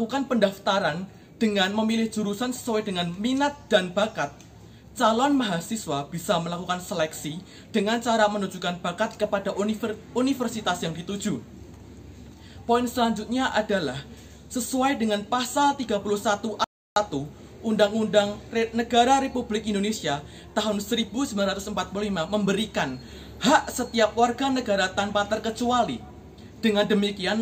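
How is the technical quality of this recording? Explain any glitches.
There's one glitch worth flagging: an audio dropout to silence from 16.64 to 16.96 s, so about 320 ms of sound simply vanishes. The sound cuts off mid-flow and then resumes, and the gap is dead silence with no room tone at all. That pattern points to the input likely being lost briefly, say a loose connection or a momentary mute, while the recorder kept writing silence. Whatever happened in that third of a second isn't recoverable.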